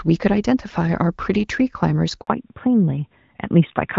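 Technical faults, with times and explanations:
2.21 to 2.27 s, handover gap: the speech cuts out for about 60 ms as the call is passed from one network link to another. No speech frames are delivered while the connection switches over, so the sound drops away quickly and leaves a short hole of silence. Whatever was said inside that window is gone rather than delayed. The audio resumes only once the new link starts carrying frames.
2.27 s to end, fallback to narrowband: immediately after the gap, the speech loses its upper band and nothing remains above 4 kHz. Before the handover, the clip carries the fuller wideband sound typical of HD Voice, lightly coloured by AMR-WB coding at around 12.65 kbit/s. After it, the sound is muffled and rougher, which points to the call having renegotiated down to the older AMR narrowband codec at about 12.2 kbit/s.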